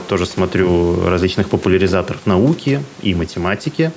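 Gain pumping runs through the whole clip: the level keeps breathing, a swing of around 5 dB. The likely cause is input gain set far too high for the microphone, so a fast limiter or compressor clamps down on every loud syllable and releases in the gaps. The faint room noise sits about 29 dB below the speech, and the speech itself sounds squashed.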